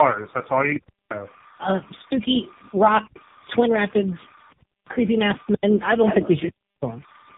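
Throughout the speech, linear timecode from a neighbouring track or cable has leaked into the audio. This timecode bleed switches between tones around 1 and 2 kHz, sitting roughly 30 dB below the speech as a constant chirping warble whose rhythm fits 29.97 frame-per-second code.

Also throughout, the call appears to have passed through several different speech codecs in series, probably three, each re-encoding the previous one's damaged output. The tandem speech coding leaves the speech rough, muffled and warbly, with nothing above 3.7 kHz.

From 3.07 to 3.16 s, the output buffer ran dry and the converter held its last sample value for about 85 ms, which fits a 4096-sample buffer. In this underrun with held sample, the sound simply stops with almost no click. Roughly a tenth of a second of live audio went missing meanwhile, so when playback resumes it jumps ahead.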